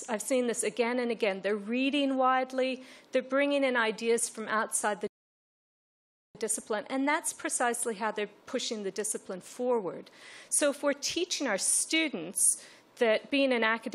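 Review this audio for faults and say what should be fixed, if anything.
At 5.07 s the sound drops abruptly into silence and stays silent until 6.35 s. When it returns, it picks up at exactly the point where it broke off, with nothing skipped or repeated. This is a rebuffering stall. The player used up its downloaded audio and had to halt until more data arrived, so about 1.27 s of dead air was inserted into the timeline while the content itself stayed intact. To prevent it, build a deeper playback buffer before starting and use adaptive bitrate switching so a slow connection lowers quality instead of emptying the buffer.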